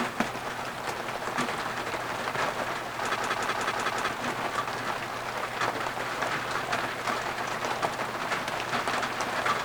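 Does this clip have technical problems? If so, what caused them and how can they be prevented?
Yes. From 3.16 to 4.09 s the sound breaks into a rapid machine-gun stutter: one 186 ms fragment repeats exactly five times at about 5.4 per second, and roughly a second of audio is lost. This is a system hang loop. The computer or audio driver froze while the sound hardware kept replaying the same ring buffer, whose length fits an 8192-sample buffer. To prevent it, update or replace the faulty driver and keep the system from stalling during capture or playback.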